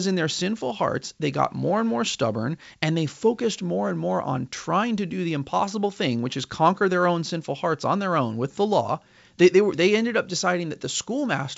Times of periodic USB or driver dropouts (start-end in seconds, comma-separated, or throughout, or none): none